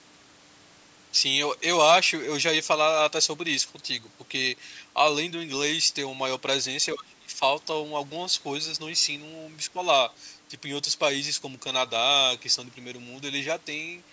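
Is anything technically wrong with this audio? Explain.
Yes. Speech suppressed in double talk occurs at 6.94–7.41 s and 9.73–9.78 s. The speech dips by roughly 25 dB, then about 10 dB, likely because an echo canceller turned down the talker along with the loudspeaker echo during overlapping talk.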